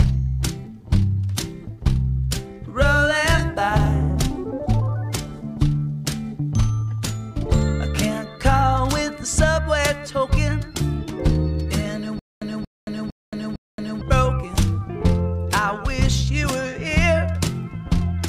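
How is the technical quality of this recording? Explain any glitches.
One glitch stands out. From 12.19 to 14.01 s, a 231 ms burst repeats four times between 224 ms silences: stutter with silent gaps, likely a stalled stream replaying its last fragment.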